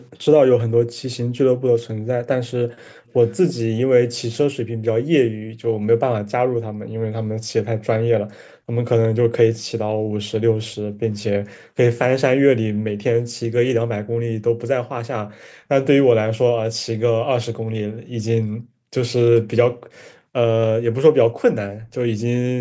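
Background gated by the echo canceller first shows at 0.68 to 0.79 s. While the far end's loudspeaker was active, the echo canceller clamped the microphone down by about 40 dB, so the room sound under the speech briefly drops out and then returns once the canceller releases.

Echo leak follows at 3.06 to 3.54 s. A faint copy of the speech trails the original by 338 ms, sitting around 20 dB below it. This is likely the other side's loudspeaker audio reaching its microphone and slipping past that side's echo canceller, which failed to remove it before sending it back.

Background gated by the echo canceller returns at 4.75 to 7.36 s, with about a second of gating in total. There are further dips at 8.65 to 8.76 s (about 26 dB), 9.95 to 11.02 s (under half a second in total), 12.73 to 12.85 s, 17.92 to 20.35 s (about a second in total) and 21.75 to 21.92 s (about 19 dB). The deepest drops reach about 40 dB, so the background repeatedly ducks or vanishes and then reappears as the canceller lets go.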